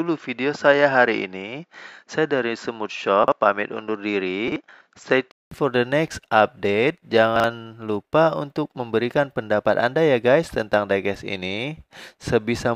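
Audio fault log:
0.00 to 5.51 s, input switched to a poorer device: the sound is band-limited, with nothing above 7.6 kHz, so it is duller and boxier than what follows. A 200 ms silence at 5.51 s precedes the fuller sound, with little change in level and faint added noise well below the signal, likely from a change of input device.
3.24 to 3.32 s, 4.48 to 4.56 s and 7.36 to 7.44 s, chunks out of order: at each spot one 40 ms chunk plays one chunk late, after the chunk meant to follow it. The swapped order makes a brief jumbled moment, with hard joins between the reordered pieces.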